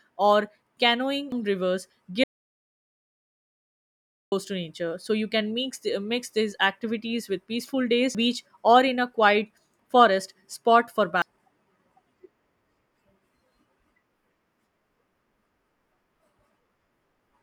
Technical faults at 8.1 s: damaged data in a compressed stream

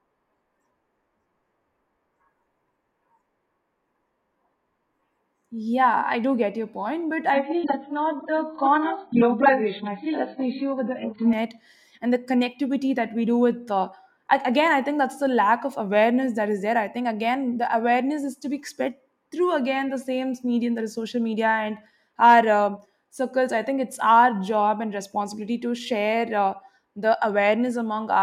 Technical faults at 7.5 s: adaptive stream at a lower bitrate

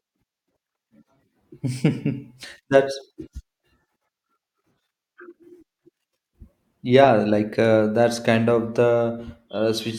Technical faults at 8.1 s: none

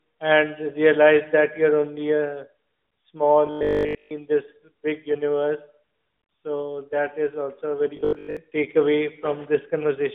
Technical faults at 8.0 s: robotic sound from repeated short buffers

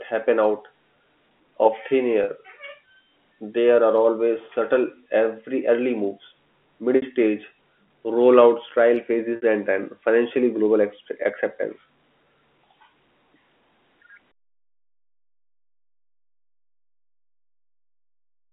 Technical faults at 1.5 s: none

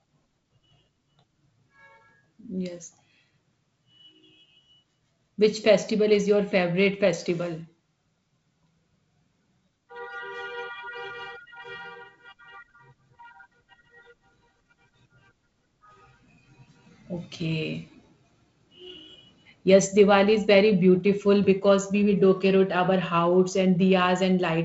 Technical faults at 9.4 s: none

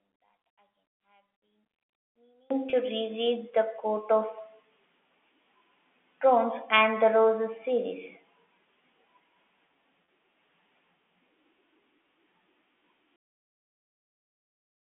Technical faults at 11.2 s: none

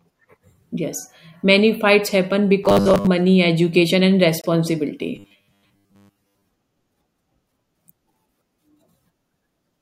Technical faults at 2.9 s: robotic sound from repeated short buffers

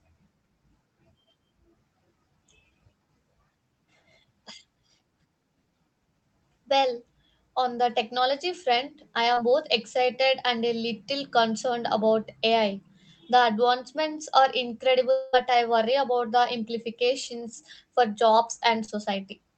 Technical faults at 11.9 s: none

